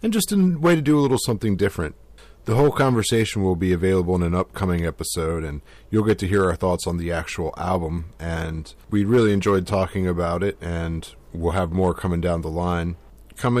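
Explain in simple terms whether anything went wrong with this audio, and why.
Hard clipping runs through the whole recording. The speech was pushed louder than one stage in the chain could handle, so the tops of the loudest moments were sliced off flat instead of rising and falling smoothly. Only a small share of the sound, around one or two percent, goes over the limit, so it is heard as a gritty crackle or rasp on peaks rather than constant fuzz. The flattened tops add sharp, high-pitched overtones that were never in the original sound.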